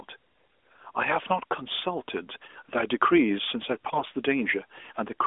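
AMR bit errors at 0.72–0.86 s and 3.85–4.09 s: flipped low-priority frame bits, roughly 3 then 7 percent, misplace excitation pulses, leaving narrowband 12.2 kbps speech hoarse and gargly.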